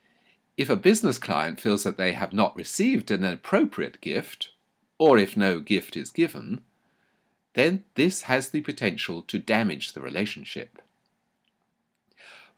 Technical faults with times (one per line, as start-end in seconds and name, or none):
none